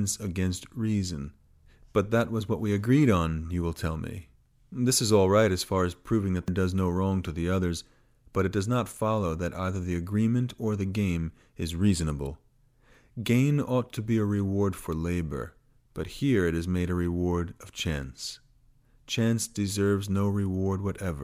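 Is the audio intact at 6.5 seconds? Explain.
No, not quite. At 6.48 s there's damaged data in the compressed stream. Some of the data got mangled, so the decoder misreads that frame, loses sync and hunts for the next frame header. It comes out as a quick chirp or blip in the speech.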